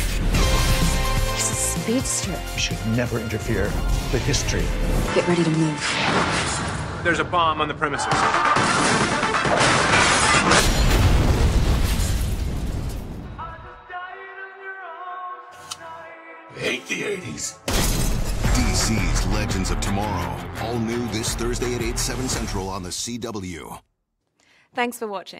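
From 5.08 to 10.60 s the sound narrows and takes on a different tone and background noise, then returns to its earlier character. This is likely an input switched to a poorer device. On a spectrogram, energy above about 10.4 kHz stops at a flat ceiling for that stretch, and a new noise floor roughly 35 dB below the signal appears. The waveform shows no gap at either switch and no clear change in level.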